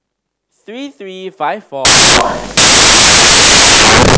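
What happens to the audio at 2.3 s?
At 2.3 s the speech is buried under loud, harsh broadband noise from samples built from the wrong bytes, running 1.85 s to the end. Misassembled byte order makes low bits dominate, filling the spectrogram with broadband noise and the waveform with dense hash.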